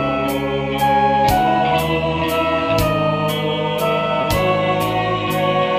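Near 4.21 s the sound briefly hangs, with the last instant held for about 20 ms until 4.25 s and a faint buzzy smear where it should have moved on, then it resumes from exactly where it paused. This is a short stall from a late packet: the packet arrived after its playout time, the jitter buffer emptied, and the receiver stretched the preceding audio to cover the gap. Nothing is lost, but playback ends up about 20 ms later than before.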